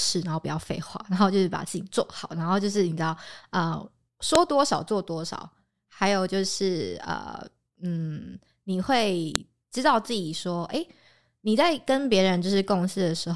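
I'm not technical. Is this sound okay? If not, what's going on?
No. The speech was stitched together from five-second pieces, and each piece's file header was played as sound (file header played as audio). That produces a sharp, loud click at 4.35 and 9.36 seconds, where the pieces join.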